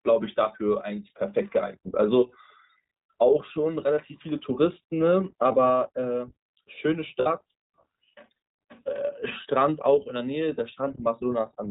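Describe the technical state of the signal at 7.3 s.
Just before 7.3 s, from 7.20 to 7.27 s, there are lost iLBC frames: about 60 ms of missing audio, consistent with three 20 ms frames. The decoder filled the gap by repeating the last pitch cycle blended with noise, so it sounds like a briefly held, buzzy vowel. On a spectrogram this shows as frozen, flat harmonic stripes; on the waveform, near-identical repeating cycles, then normal speech resumes almost immediately.

Throughout the clip, the iLBC codec at 15.2 kbps leaves the speech plainly rough and synthetic. The spectrogram shows a hard ceiling at 4 kHz with nothing above it.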